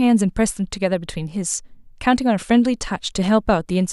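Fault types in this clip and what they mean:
No audible faults detected.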